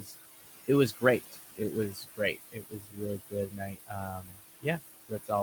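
Throughout the clip the background sinks and swells with the speech. These are noise suppressor artifacts: the suppressor pulls down bands it judges to be steady noise, by about 16 dB, and the room noise sits only about 10 dB under the speech.

At the opening, 0.00 to 0.14 s, just before "it was", the start sounds swallowed, dipping by about 11 dB. Similar dropouts follow at 1.92 to 2.36 s (about 13 dB), 2.52 to 3.01 s (about 19 dB), 3.19 to 3.94 s (about 18 dB), 4.12 to 4.66 s (about 22 dB) and 5.09 to 5.31 s (about 15 dB). Each lasts from a tenth of a second to nearly half a second. This is speech cut by the noise suppressor, which mistook soft parts of the speech for noise and turned them down with it.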